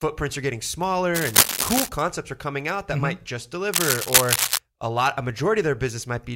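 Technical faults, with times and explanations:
1.14–1.89 s and 3.73–4.57 s, cable scratch noise: dense, uneven scratching sits over the speech, about 5 dB above it, first after "are getting" until "are coming out that", then after "might just" until "a lot a". Likely a worn cable or connector being moved, its contact resistance jumping rapidly.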